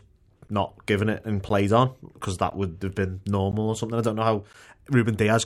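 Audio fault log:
0.48, 1.49, 2.50, 3.52 and 4.53 s: gap between chunks. Five brief hard-edged holes, each about 13 ms, recur roughly once per second. The audio arrives in 1 s chunks with a short stretch of silence inserted at each join, so nothing is lost but the flow breaks.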